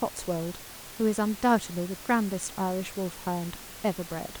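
No technical faults are audible.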